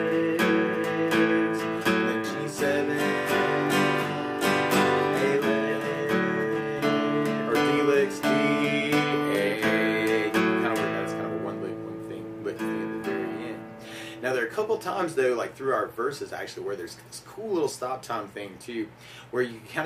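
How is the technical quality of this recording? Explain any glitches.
No technical glitches can be heard anywhere in the recording. The audio continues without any interruption or disturbance that would call for an explanation.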